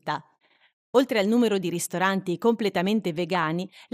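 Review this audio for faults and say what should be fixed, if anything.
MP2 compression runs through the whole clip. The speech sounds dull and gurgling, with grainy distortion, likely from MPEG Layer II coding at a rate that fits about 80 kbps. At that rate upper sub-bands lose their bits and switch off, and the bands that remain are coarsely quantised. Encode at a higher bitrate or from a cleaner source to prevent it.

DAB burbling appears from 1.84 to 1.92 s, just after "al numero di", and again from 3.35 to 3.44 s. Bit errors got past error correction into the MP2 data. The corrupted samples put short blips of noise in single sub-bands, and wrong scale factors, where they get through, make sub-bands jump in level for up to a frame. Stronger reception or more robust error protection would prevent it.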